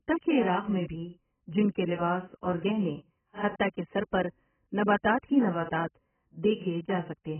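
Throughout the speech, nothing is present above about 3.1 kHz, and the remaining band sounds dull, smeared and warbly with fizzy sibilants. This is heavy damage from AAC compression, likely AAC-LC at a very low bitrate near 10 kbps, which discards high bands and coarsely quantises what remains.

At 6.43 s a brief pre-echo occurs. A sharp attack lands late in a transform block, so quantisation noise sized for it spreads about 11 ms ahead, heard as a short hiss before the onset and a softened attack.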